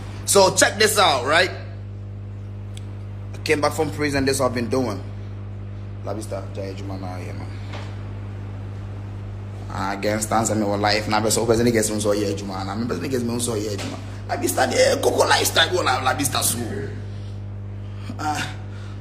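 Mains hum runs throughout, a steady 50 Hz tone only about 10 dB below the sound. Power-line interference, through a ground loop or nearby transformer, leaked into the signal.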